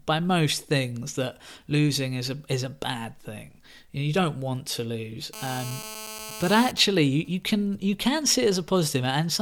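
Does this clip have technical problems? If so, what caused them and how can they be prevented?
Yes. From 5.33 s to 6.71 s, right after "don't want to lose", there is a GSM phone buzz: a hard, raspy tone at 217 Hz with a dense ladder of harmonics, sitting about 13 dB below the speech and unrelated to it. A 2G phone nearby, in a call, was transmitting bursts 217 times a second, and the audio circuit rectified the radio pulses into the signal path, producing that steady buzz. Keep phones switched off or in flight mode, well away from microphones, cables and preamps.

From 6.77 s to 7.75 s, ending just before "you can", the buzz gives way to GSM signalling bursts: even ticks with a longer 217 Hz buzz twice a second, about 20 dB below the speech. A 2G phone nearby, in a call but with its user silent, was sending only short groups of radio bursts, and the audio circuit rectified each group into a brief tick or buzz. 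The same prevention applies: no active 2G phones near the recording chain, backed by shielded, balanced cabling.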